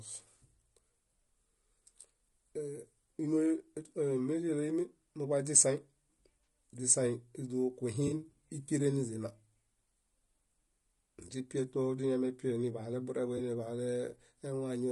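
The whole speech clip sounds rough and grainy, with noise between harmonics and a thin top band, likely from low-delay AAC compression near 32 kbps. At 6.45 s, 8.07 to 8.12 s (just before "íkeren niźina"), and 13.37 to 13.4 s, AAC frame loss with concealment leaves brief smeared, phasey patches.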